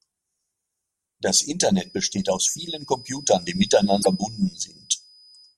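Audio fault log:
1.67 s to end: feedback whistle. A thin, steady tone near 5 kHz sits roughly 20 dB below the speech, swelling and fading slowly in level. This is likely a loudspeaker-to-microphone loop held just short of runaway, so one frequency keeps ringing without building up.
3.99–4.07 s: damaged data in a compressed stream. A brief glitch cuts across the speech for about 80 ms. Corrupted frames were misread or rejected by the decoder, which lost sync and resumed at the next valid frame header.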